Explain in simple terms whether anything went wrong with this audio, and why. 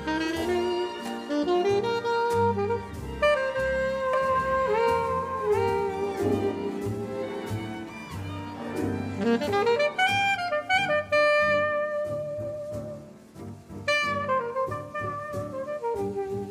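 A second copy of the sound was likely mixed in, either picked up again through a slower route or left behind by an edit. From 4.13 to 6.51 s, this doubled audio track repeats everything about seven tenths of a second late, a bit quieter, starting and stopping suddenly.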